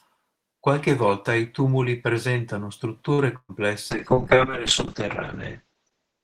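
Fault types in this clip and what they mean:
Short stall from a late packet: Right after "volta i tumuli presentano", around 3.13 to 3.21 s, a packet shows up late and the jitter buffer runs dry. The receiver stretches the last bit of sound by about 48 ms to cover the wait, then picks up exactly where it left off. Nothing is lost, but that moment drags slightly with a held sound, and everything after it runs 48 ms later.
Burst of packet loss: From about 3.36 to 3.52 s, a run of audio never arrives in time, and roughly 120 ms of material is simply gone. The receiver fills the hole by carrying the last sound forward and fading it out, so it decays into about 50 ms of near-silence before playback jumps ahead. You hear a brief smeared tail, a dropout, then a slight skip forward.
Call bitrate drop: From about 3.92 s to the end, the call's bandwidth estimate collapses and the encoder gets squeezed hard. 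The sound points to a fall from around 32 kbps to about 7 kbps, sitting at the bottom for roughly 1.56 s. At that rate Opus codes coarsely and cuts the top end from 20 kHz down to 8 kHz, so the sound turns muffled, rough and watery.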